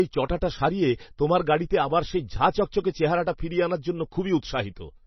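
From start to finish the speech sounds heavily squeezed, with nothing at all above 5.9 kHz, so the s sounds lose their edge and the top end feels capped off. There's also a watery, swirly quality, where faint detail flickers in and out and the consonant onsets smear. That's likely MP3 compression pushed hard. The encoder runs out of bits, chops the treble at a fixed point and drops quiet frequency lines frame by frame, which fits a very low bitrate, around 24 kbps.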